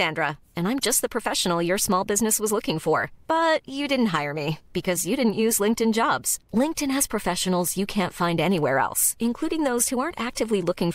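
There are no technical faults to describe at any point in the speech.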